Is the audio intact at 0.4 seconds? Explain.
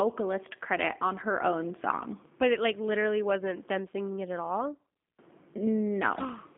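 No. At 0.4 s, as throughout the clip, the speech carries G.729 codec damage. It passes only 200 Hz to 3.6 kHz and is rebuilt from a vocal tract filter, a pitch predictor and a few pulses per frame, which fits a G.729A stream at 8 kbit/s. The result sounds plainly rough and synthetic. A simple telephone band-pass filter would dull the sound in the same way, but it would not add this buzzy, modelled roughness.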